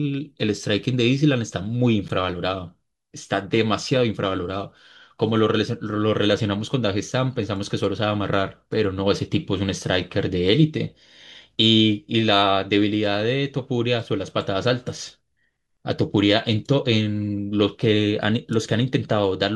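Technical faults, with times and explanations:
2.08 s, Bluetooth stall: speech cuts to 13 ms of silence and resumes, likely a drained buffer awaiting resent packets; flat waveform gap, blank spectrogram column.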